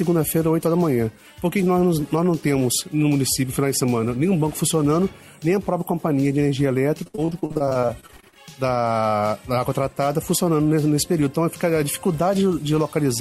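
From 7.03 to 8.37 s the audio turns choppy and robotic: repeated packet loss, with around twenty holes up to 60 ms long, each patched by stretching the preceding sound. Nearly two fifths of the stretch is concealment, and the rapid recurrence, unlike one isolated dropout, creates the choppy stutter.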